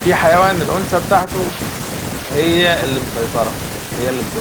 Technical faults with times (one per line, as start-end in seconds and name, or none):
none